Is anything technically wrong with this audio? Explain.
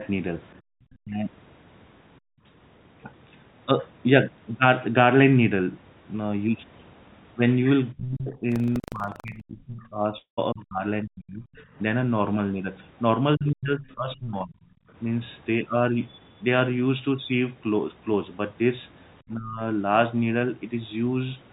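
Yes, there are several faults.

Background gated by the echo canceller: from 2.2 to 2.45 s the room sound sinks by about 40 dB, and again briefly from 14.84 to 14.89 s by about 21 dB. While the far end was playing, the canceller clamped the microphone hard, then released it.

Speech suppressed in double talk: the talker dips and thins out from 7.93 to 11.46 s (roughly 30 dB at worst), 13.36 to 14.56 s (roughly 25 dB) and 19.28 to 19.61 s (roughly 20 dB). The likely cause is both sides speaking at once, so the canceller could not tell the talker from echo and attenuated both.

Buffer tearing: from 8.48 to 9.42 s a rattling 25 Hz buzz rides on the signal. The writer and hardware reader of the ring buffer have slipped, so a small slice of each period replays audio from around 150 ms earlier, with hard joins each time.

Long network dropout: at 10.18 to 10.39 s the sound smears into a fading buzz for about 193 ms, then about 120 ms of silence, and resumes with 200 ms gone. 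The likely cause is packets failing to arrive, with concealment filling the gap until it gave up.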